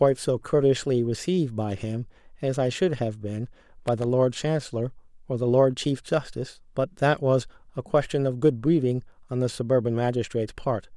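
At 3.87 to 4.04 s, a loose connector crackle cuts through the speech. A worn contact breaks intermittently, chopping the signal into an irregular scratchy burst.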